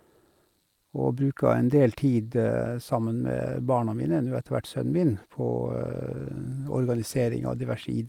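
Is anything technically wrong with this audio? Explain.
No, nothing technically wrong stood out on listening to this speech recording.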